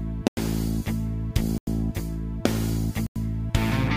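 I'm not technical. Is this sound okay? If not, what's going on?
No. There is a block of digital silence at 0.28 to 0.37 s, again at 1.58 to 1.67 s, and at 3.07 to 3.16 s. Each time, the sound drops out completely for about 93 ms and snaps straight back. This happens when the playback software doesn't deliver the next chunk of sound in time, so zeros fill the gap. The identical length fits a 4096-sample buffer running late.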